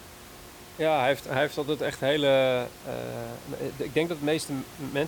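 Nothing goes wrong anywhere in this speech recording; the only thing under it is the background of the room, sitting about 19 dB below the talking.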